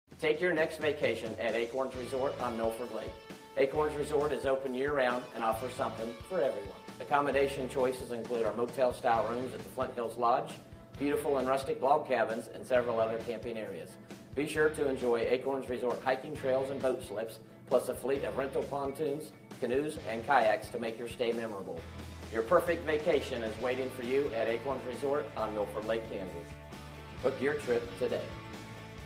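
Nothing in this audio stands out as a technical problem at any point, so there's really nothing to flag here.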